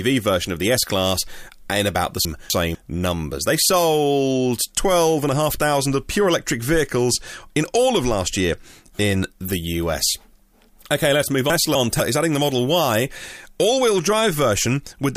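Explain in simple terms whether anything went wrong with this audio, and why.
Chunks out of order at 2.25 to 2.75 s and again at 11.5 to 12.0 s: a quarter-second piece of speech arrived late and played after the piece meant to follow it. Nothing is missing, but the swap sounds jumbled.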